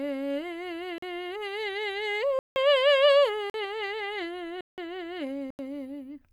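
The music drops to digital silence five times, at 0.98 s and 3.50 s for about 43 ms each, at 2.39 s and 4.61 s for about 171 ms each, and at 5.50 s for about 85 ms. Each block of digital silence starts and stops abruptly, which fits output buffers of 2048, 4096 and 8192 samples not being filled in time. The cut comes with no fade, so it sounds different from a smoothed or concealed dropout.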